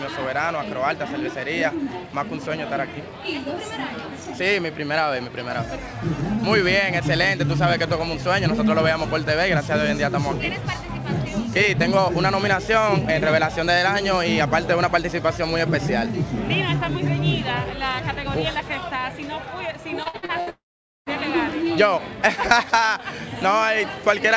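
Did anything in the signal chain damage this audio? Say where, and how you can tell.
Yes. Repeated packet loss (robotic sound), network stage, 20.03–20.50 s: five short holes, the longest 62 ms, each patched by repeating prior sound, giving choppy audio with pieces missing.

Long network dropout, 20.50–21.09 s: the sound smears into a fading buzz or hiss, then goes silent for about 0.47 s before resuming with that stretch gone, likely a network outage.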